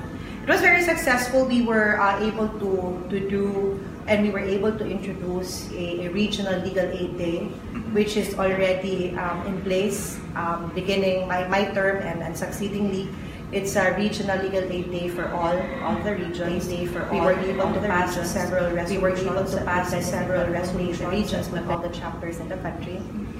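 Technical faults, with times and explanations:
16.45 to 21.75 s, doubled audio track: a second full-band copy of the sound runs about two seconds behind and at roughly the same level, clean and without decay, starting and stopping abruptly. Likely caused by a slower second capture path or a misaligned duplicate edit.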